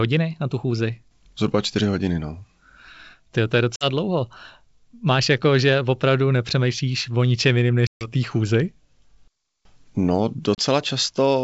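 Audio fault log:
3.76–3.85 s, 7.87–8.08 s, 10.55–10.63 s: packet loss on an ADPCM call. Gaps of 50, 140 and 30 ms follow "to je", then fall between "nepřemýšlíš o ničem jiným" and "té chůzi". Each is a hard-edged silence, not a concealed fill. Speech resumes slightly distorted until the G.722 decoder's predictor and step size resynchronise.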